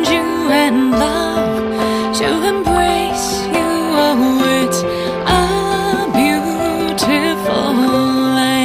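At 4.94 s a faint ticking starts and runs to the end of the clip. This is Wi-Fi interference. A nearby Wi-Fi radio is leaking into the audio circuit, which rectifies the radio bursts into audible clicks. The ticks repeat every 102.4 ms, the radio's beacon interval. That gives a steady pulse of nearly ten ticks per second. The ticking sits quietly underneath, roughly 35 dB below the main sound.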